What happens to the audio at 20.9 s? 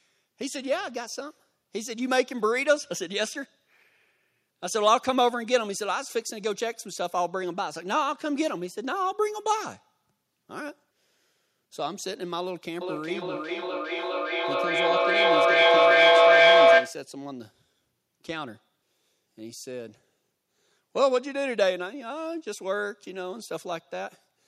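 Nothing goes wrong at 20.9 s; the speech carries on cleanly through that moment with no dropout, click or distortion to be heard.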